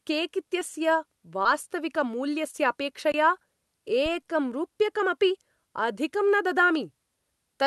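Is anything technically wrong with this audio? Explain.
Yes. This speech has three kinds of fault.

Short concealed packet loss occurs at 0.59, 1.43 and 2.51 s. Each time about 20 ms of the call arrived too late, and the decoder extrapolated the preceding sound to fill the gap. The result is a brief smear or wobble. Unlike a dropout, there is no hole and no hard click.

Blocks of digital silence fall at 1.63 s (about 4 ms) and at 3.12 to 3.14 s (about 21 ms, which fits a 1024-sample buffer left unfilled). The sound cuts out and comes back without any fade. The short gap is heard as a tick and the longer one as a clipped hole.

A phantom power thump comes at 4.06 s, just before "रूप्यकमपि अधिकं". A supply switching on a live input sent a step through the coupling capacitors. It is a deep, low-frequency bump that decays in about 45 ms. The Opus call path itself limits the top end to about 12 kHz.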